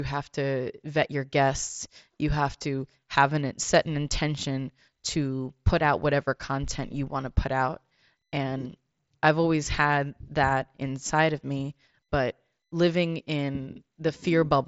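The speech comes through a Bluetooth mSBC headset link working as designed, with content extending to about 7.7 kHz and nothing above it, and no technical faults can be heard.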